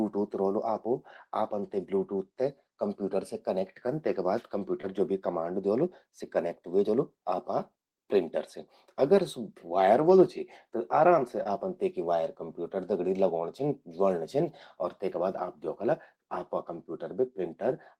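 A speech clip with two short concealed packet losses. The first sits at 4.81 to 4.85 s, just before "ज्वो भी कमांड". The second falls at 11.43 to 11.47 s, between "चि त आराम से" and "आपन तेकि वायर कंप्यूटर". Each time about 20 ms of audio failed to arrive in time. The decoder patched the gap by extending the preceding sound, then faded back into real audio. Each spot is heard as a brief smear or wobble.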